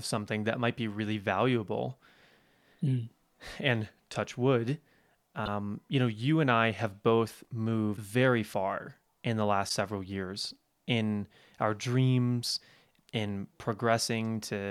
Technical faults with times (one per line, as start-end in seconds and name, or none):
5.45-5.48 broken MP3 bit reservoir
7.96-7.99 broken MP3 bit reservoir
9.68-9.71 broken MP3 bit reservoir